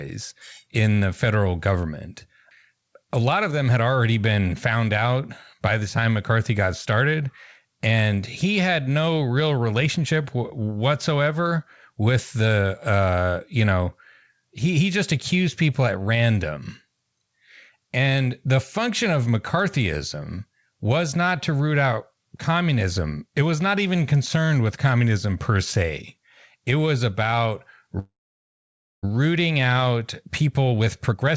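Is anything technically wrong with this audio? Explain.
Yes, there are two faults near the end of this speech clip, which passed through a call path whose sound stops at 8 kHz, fitting G.722.

From 27.99 to 29.05 s there is a call audio freeze: delayed packets likely let the jitter buffer run dry, so the last sound trails off into about 0.93 s of silence before the speech resumes where it stopped.

From 30.22 to 31.32 s a jitter buffer speed-up trims roughly 0.15 s of accumulated delay by cutting short pitch-period slices, so the speech runs at 112% speed, hurried but at the same pitch.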